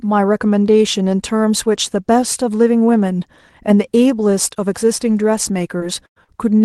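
Between 5.07 and 5.53 s there are four instances of a lost packet rebuilt from error correction, at 5.07 s, 5.13 to 5.15 s, 5.23 s and 5.43 to 5.53 s. Each 20 ms stretch was replayed from the low-bitrate copy carried in the following Opus packet, so there is no dropout, only a brief patch of rougher, grainier sound. On a spectrogram each appears as a short column of smeared, noisier harmonics with no silent gap. The last instance also carries about 10 ms of added time, where playback was slightly stretched.

At 5.78 to 5.82 s a short concealed packet loss fills about 17 ms of a 20 ms hole by extending the preceding sound. The error-correction copy takes over from 5.80 s, so the disturbance is a quick smear rather than a click. In the waveform the envelope briefly repeats itself, and the spectrogram shows a held, slightly blurred pattern.

From 6.06 to 6.30 s a burst of packet loss removes about 100 ms. 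The decoder continues the last sound and lowers it as the gap lengthens, giving a held sound that fades before the audio resumes further on, with the section in between missing. A second short concealed loss inside it, at 6.24 to 6.30 s, fills about 38 ms. On a spectrogram the last spectrum freezes and then dims. In the waveform the amplitude tapers before picking up again. Above all of this, the 12 kHz ceiling of the Opus call path shows as a sharp upper edge across the spectrogram.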